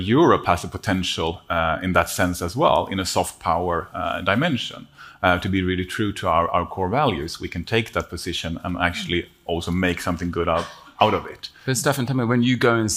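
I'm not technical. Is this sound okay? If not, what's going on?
No. From 2.28 to 4.53 s, quiet parts turn grainy and gritty. The likely cause is low bit depth without dither: the sound was rounded to just 10 bits.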